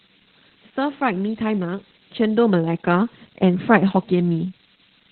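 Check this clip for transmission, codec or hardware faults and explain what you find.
Two faults run through the whole clip: a switching supply whistle and heavy Opus voice compression.

Switching supply whistle, throughout: a thin, high whistle, wandering between about 6.3 and 8.6 kHz and centred near 7 kHz, fairly prominent at roughly 10 dB below the speech. A switching power supply is cycling at an audible rate, and its frequency moves as its load shifts.

Opus voice compression, throughout: the speech is muffled, hoarse and somewhat robotic, with nothing above about 4.3 kHz. The narrowband SILK mode codes the speech with linear prediction and a coarsely quantised excitation. That band limit and the heavy damage point to a very low bitrate, around 8 kbps.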